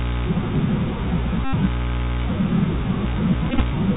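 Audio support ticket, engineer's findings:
Narrowband, muffled speech for the whole clip, nothing above 4 kHz. Scratchy s sounds, granular hiss under the voice, plainly audible distortion on loud high content. Bluetooth CVSD headset codec, 64 kHz one-bit delta coding whose adaptive step can't keep up.

1.45 to 1.53 s: steady buzz near 267 Hz replacing the speech. Bluetooth headset packet repeated: about 82 ms lost, consistent with roughly 22 consecutive 3.75 ms packets each re-decoded from the last good one.

3.50 to 3.62 s: broken, intermittent buzz over about 98 ms. Same fault, scattered: about 52 ms of repeated packets, longest run around 20 ms, so short buzz bursts and ticks alternate with real audio.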